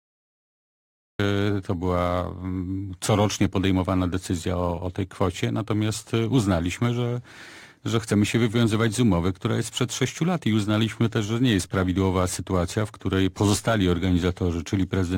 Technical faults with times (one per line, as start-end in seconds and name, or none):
0.00-1.19 cut-off start